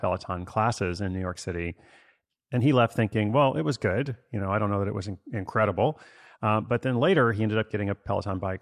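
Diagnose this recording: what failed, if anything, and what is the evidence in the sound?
Nothing failed in this speech recording. There is no event in the sound that points to a failure at any stage of the chain.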